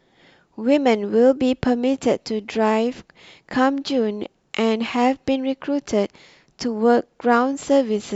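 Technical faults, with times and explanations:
No technical faults are audible anywhere in this speech recording.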